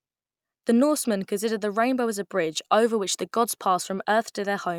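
Speech recording with no audible technical faults anywhere in the clip.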